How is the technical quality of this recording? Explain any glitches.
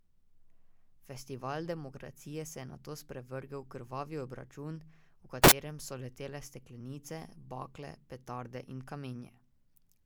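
A brief burst of harsh noise breaks the speech from 5.44 to 5.52 s, about 80 ms. It is a case of samples built from the wrong bytes. For that stretch each sample was assembled with its bytes misaligned or swapped, so the rapidly fluctuating low-order bits ended up as the most significant part of the value. The result is loud, harsh broadband noise instead of the speech. Unlike a clipping burst, it keeps little trace of the original waveform's shape.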